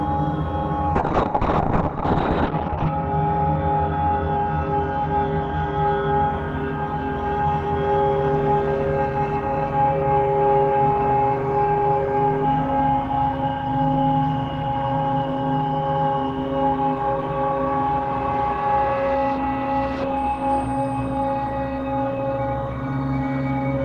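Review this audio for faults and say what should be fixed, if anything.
A call bitrate drop from 0.96 to 6.35 s makes the sound rough and muffled. The bandwidth narrows from 20 kHz to 6 kHz, consistent with a fall to roughly 10 kbps. A spectrogram shows the region above 6 kHz going empty. Give the call steadier network headroom or a higher minimum encoder bitrate so the bandwidth estimate cannot starve the codec.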